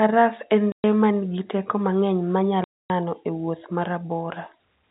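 Abrupt silent holes with hard edges cut the speech at 0.72 s (120 ms) and 2.64 s (260 ms). This is packet loss filled with silence, and the gap lengths fit 20 ms packets.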